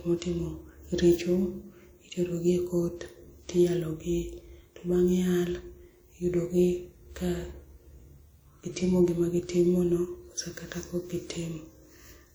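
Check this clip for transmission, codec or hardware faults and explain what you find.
One codec fault runs through the speech clip. Throughout, a plainly audible ringing, washy hiss breathes with the sound, likely from WMA compression at a rate around 48 kbps smearing quantisation noise. The spectrogram shows blurred, holey patches up to 20.1 kHz.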